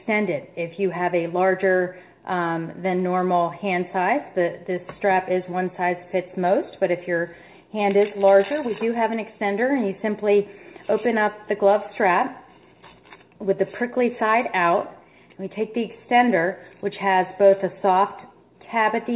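No technical faults can be heard anywhere in the clip. It carries the sound of a working call path, with nothing above 4 kHz, which fits a narrowband telephone codec such as G.711 mu-law.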